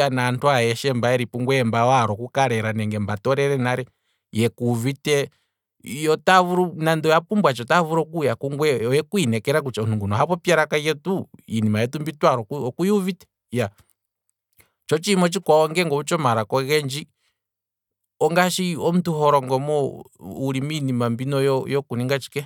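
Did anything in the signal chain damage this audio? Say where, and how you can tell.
No, none of the stages from capture to playback left any audible damage on this speech recording.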